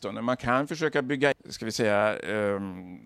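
A speech recording with damaged data in a compressed stream at 1.32 s: corrupted bytes throw the decoder out of sync, producing a chirp, squawk, click or short hole, seen as a thin vertical broadband smear and abrupt waveform discontinuity.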